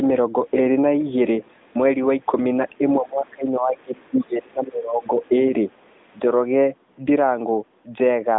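From 2.99 to 5.18 s the speech sinks and breaks up, dropping by around 25 dB at its deepest over roughly two seconds in all. This is speech suppressed in double talk: with both sides talking, the echo canceller likely mistook the talker for loudspeaker echo and attenuated both.

During and just after that stretch, faint scraps of another voice, the other side's voice leaking through, surface at 3.77 to 3.82 s, 4.03 to 4.11 s and again at 5.03 to 5.32 s, some 35 to 40 dB below the speech. The loudspeaker signal was likely not fully cancelled from the microphone.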